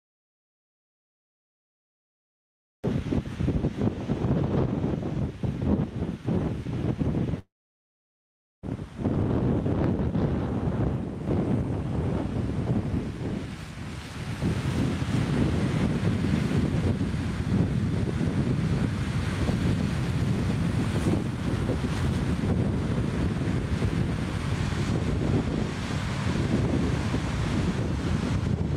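From 7.39 to 8.65 s the audio breaks off in what is likely a long network dropout: a brief fading buzz or hiss, then about 1.1 s of silence.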